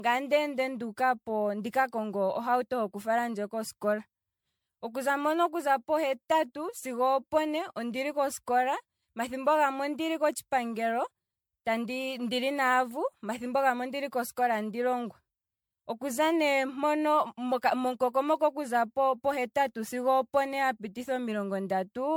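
From start to finish the speech carries a swirling, hollow quality, with consonant attacks smeared and a watery noise that shifts under every syllable, while content still reaches up to about 19.9 kHz. That combination points to generation loss, likely from repeated MP3 re-encoding, around ten passes at a rate that fits 96 kbit/s. A single low-bitrate encode would cut the top band harder but sound cleaner. Here each pass re-quantised on a shifted frame grid, stacking holes and noise.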